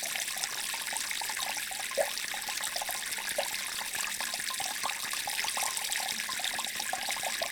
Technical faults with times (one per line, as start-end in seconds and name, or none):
2.25-7.42 train of clicks